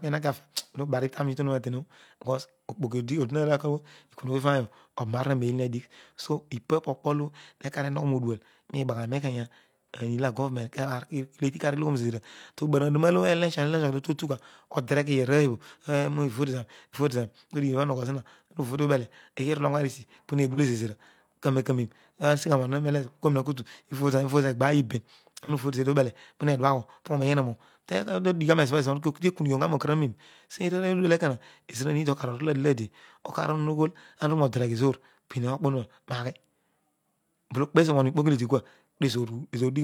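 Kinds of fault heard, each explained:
AAC frame loss with concealment: one coded frame of about 42.7 ms went missing twice in this speech, near 20.53 s and 25.43 s, and the decoder rebuilt each gap from the previous good spectrum, leaving a brief smeared, noisy patch rather than a dropout.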